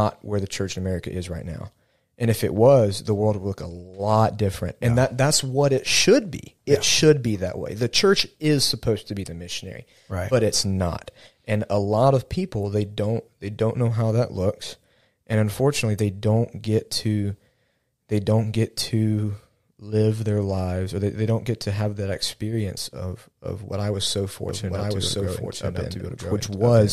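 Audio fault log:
24.49 s to end, doubled audio track: after "what I was so", a second copy at roughly equal level enters abruptly about one second behind, likely from a slower capture path.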